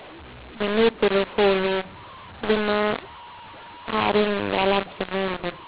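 From start to finish the speech sounds harsh and gritty, with levels that jump unevenly, some parts too loud and others oddly thin. The pauses never fall silent and stay filled with hiss. The top of the band stops near 4 kHz, consistent with 8 kHz telephone coding. The cause is mu-law and A-law mixed up: audio coded with G.711 mu-law was decoded as A-law, so each logarithmic code maps to the wrong level and the quietest samples land well above silence.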